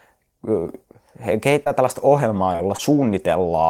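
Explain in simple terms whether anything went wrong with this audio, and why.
Short concealed packet loss hits the speech at 1.64 s, just before "tällaista ohjelmaa", and again at 2.53 and 2.77 s. About 20 ms of audio went missing each time, and the receiver patched the gap with a brief smear rather than a silent dropout.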